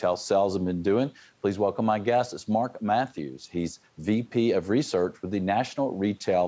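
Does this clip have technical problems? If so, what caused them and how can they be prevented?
No technical problems here.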